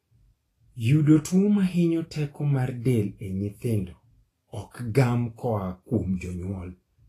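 Throughout the speech, the codec was likely Vorbis at low quality. It quantises the treble so coarsely that fine detail turns into noise of similar energy, and nothing remains above 14.2 kHz. The damage is plainly audible as grainy hiss and points to a bitrate near 31 kbps.

From 4.71 to 4.74 s, a sharp onset fell late in a transform block, so quantisation noise sized for the loud attack spread back across the quiet 39 ms before it. This pre-echo is heard as a short hiss just before "gam koa kuom", with the attack sounding smeared.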